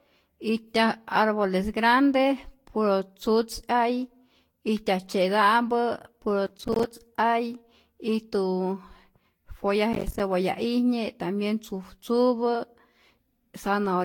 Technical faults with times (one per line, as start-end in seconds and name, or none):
0.00-14.05 generation loss
6.46-6.91 processor overload crackle
9.93-10.20 processor overload crackle